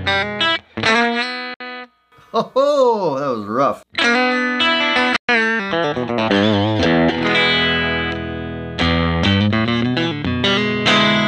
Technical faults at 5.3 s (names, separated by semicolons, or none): Bluetooth dropout